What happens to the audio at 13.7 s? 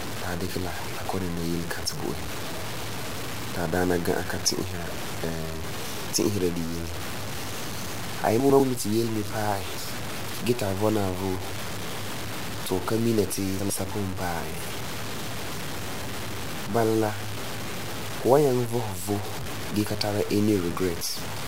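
Between 13.6 and 13.8 s the speech briefly jumbles as two 100 ms pieces play in swapped order. This is chunks out of order: one chunk arrived or was written a chunk late, so it sounds after the piece that should follow it. No audio is lost, but the wrong sequence leaves hard, unmatched edges, which is why the moment sounds garbled rather than silent.

Over that same stretch, as across the whole clip, the speech has a coarse, grainy distortion that rises and falls with the sound. The noise sits only about 10 dB below the speech, and quiet parts turn rough or sputter. The likely cause is low bit depth without dither: the audio seems to have been truncated to about 5 bits with no dither, so the rounding error follows the signal instead of forming a steady hiss.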